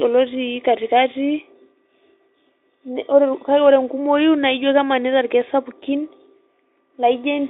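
No technical faults are audible in this recording.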